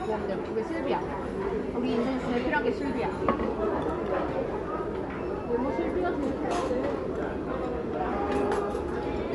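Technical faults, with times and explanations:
Throughout, MP3 compression: likely a bit-starved encoder, fitting about 47 kbps, cuts everything above 11.3 kHz and flickers weak lines, sounding dull and watery.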